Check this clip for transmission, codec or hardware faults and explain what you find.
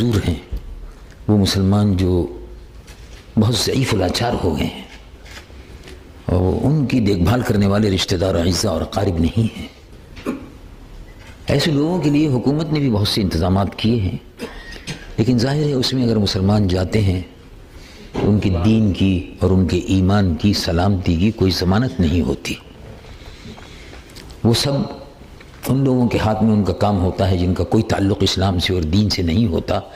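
One fault shows up, an adaptive stream at a lower bitrate. From 6.94 to 18.94 s, quality suddenly drops, with more codec artefacts, and no gap. The player switched to a leaner encoding, consistent with Opus dropping from 64 to 24 kbit/s.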